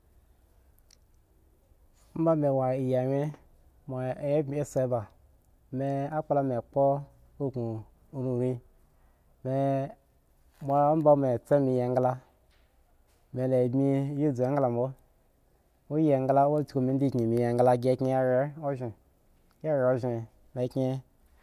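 Nothing goes wrong anywhere in this speech recording, so there's no technical fault to walk through here.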